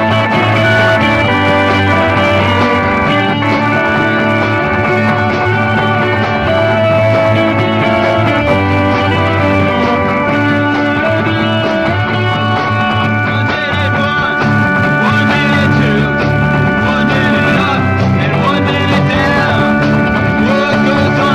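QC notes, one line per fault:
throughout: hard clipping. The signal is pushed about 7 dB past what a stage can pass, so around 4% of samples get flat-topped, which adds high harmonics.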